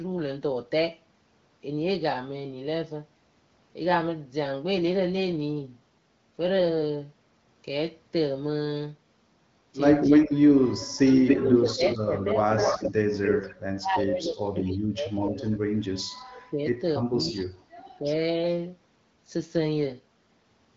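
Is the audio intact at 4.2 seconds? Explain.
Yes, the audio is intact at 4.2 seconds, with nothing faulty at that moment.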